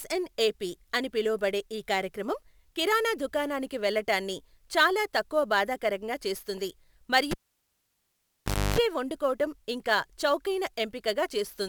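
Sample clock jitter runs throughout: a wandering converter clock, with timing errors on the order of 5 µs, adds a rough hiss roughly 25 dB below the speech that rises on loud, bright passages.

A cable pulled and plugged in at 7.31 to 8.79 s pops, drops to near silence for about 1.4 s, buzzes at 50 Hz for 0.3 s as the tip touches, then pops back.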